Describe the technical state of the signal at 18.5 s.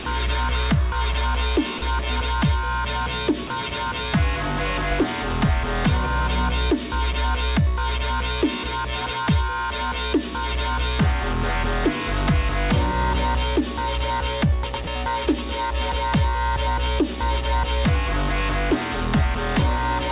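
At 18.5 s the signal is intact, carried through the WebRTC call path with its ordinary narrowband character and nothing above 4 kHz.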